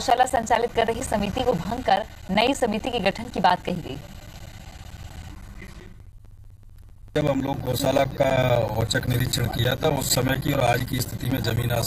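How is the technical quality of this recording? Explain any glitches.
The recording is marred by one steady, repeating glitch. Periodic USB or driver dropouts run from 0.10 to 11.83 s. Every 64 ms, something stalls the USB bus or audio driver, and roughly ten milliseconds of audio is replaced with silence. This produces an evenly spaced ticking that is heard only while sound is present.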